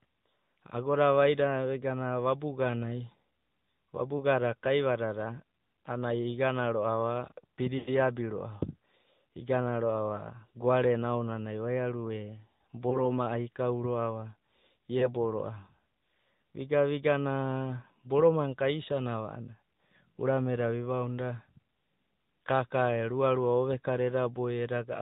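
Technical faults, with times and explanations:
Throughout: AMR narrowband mobile codec. Everything above 4 kHz is gone, so the speech has that boxy, phone-line feel. On top of that there's a clearly audible buzzy, synthetic edge, because the codec rebuilds the voice from a vocal-tract model and a few excitation pulses per subframe instead of keeping the waveform itself. The damage sounds like a mid-rate AMR-NB mode, which fits about 10.2 kbps.
4.18–4.23 s, 7.78–7.90 s, 12.90–13.01 s, 14.99–15.09 s: lost AMR speech frames. At 4.18, 12.90 and 14.99 s there's a quick dip or warble from about 20 ms of missing audio. The decoder covers the gap by replaying the last good pitch and filter settings at lower gain. The 7.78 s gap covers about 100 ms, which fits five lost frames in a row. The sound smears and fades toward silence there, then comes back a bit weak and rough.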